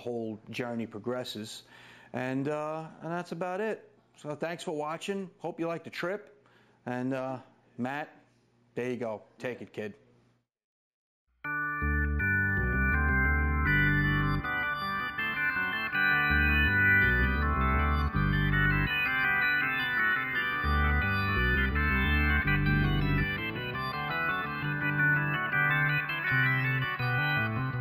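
Throughout the clip there is imaging from linear upsampling. The rate was raised by straight-line interpolation, which fits a 16 kHz source lifted to 44.1 kHz. The top end sounds dulled. A faint mirrored band, about 35 dB down, sits between 8 and 16 kHz, adding a light metallic shimmer.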